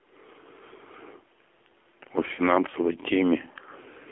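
AMR narrowband mobile codec coding runs through the whole of this speech clip: the band stops at about 300 Hz and 3.4 kHz, and the voice sounds buzzy and synthetic, which fits the low 7.4 kbps mode, where a vocal tract model driven by sparse pulses stands in for the real waveform. Lost AMR speech frames appear at 0.76 to 0.81 s and 2.36 to 2.42 s. Failed frames made the decoder repeat its last good settings at lowered gain, producing a brief warbling dip. The first gap, about 40 ms, fits two missing frames, and the second fits one 20 ms frame.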